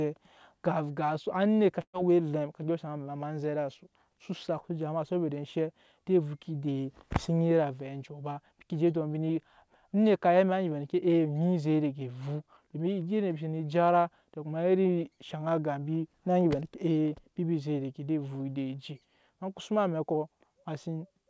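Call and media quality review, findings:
Burst of packet loss, 1.82–1.96 s. Speech replaced by concealment: about 114 ms of the last sound repeated and faded, with about 70 ms of silence, before audio resumes. Component: jitter buffer/receiver. About 120 ms of speech missing outright. Band-limited to 8 kHz, consistent with G.722 at 64 kbps on the call path.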